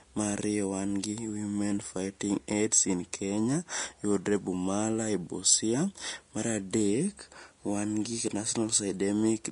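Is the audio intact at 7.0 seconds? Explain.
No. At 7.0 seconds, as throughout the clip, the speech sounds dull, with nothing above 10.6 kHz. This is likely low-bitrate audio saved at a high bitrate. An earlier low-bitrate encoding stripped the top octave and left its artefacts, and re-encoding at a generous bitrate only preserved that damage. The large file cannot restore what the first codec discarded.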